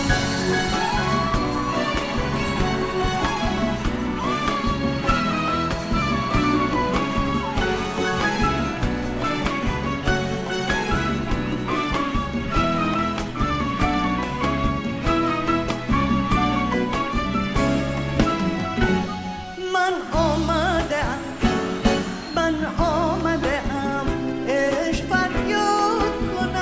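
Nothing stood out as a technical problem on listening to this recording.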